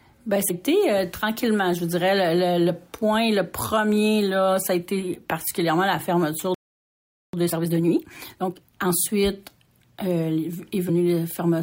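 A short glitch at 0.49 s is damaged data in the compressed stream: corrupted bytes made the decoder misread a frame and resync at the next header. At 6.54 s the sound cuts out for about 0.79 s until 7.33 s, a playback stall most likely caused by the player running dry or its thread being blocked. From 7.33 to 8.89 s the audio runs hurried at 1.5 times speed with unchanged pitch, a time-compressed catch-up as small cross-faded pieces are dropped to clear the backlog.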